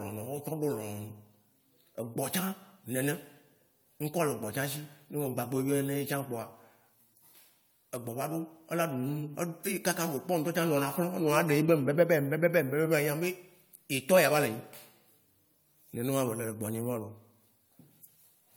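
From start to finish the speech has that swirly, smeared, hollow quality of generation loss, and the consonant attacks come out blurred rather than crisp. It sounds rougher than a single encode at a decent rate should, which fits an AAC-LC stream around 96 kbit/s that's likely been decoded and re-encoded about five times. Each pass re-quantises on a shifted frame grid, so the noise and spectral gaps pile up. Nothing sits above 20 kHz.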